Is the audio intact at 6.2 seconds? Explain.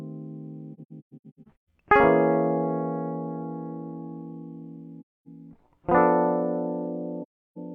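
Yes, at 6.2 seconds the music plays through intact, with no dropout, click, glitch or other fault at that moment.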